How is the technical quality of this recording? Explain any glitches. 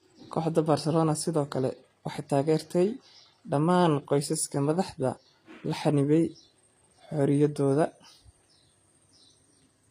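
Quality is limited by codec damage, plainly audible throughout the speech. The treble has a gritty, metallic or lispy cast and stops at about 14.9 kHz, likely from HE-AAC compression at a low bitrate near 24 kbps, where treble is rebuilt from copied lower bands.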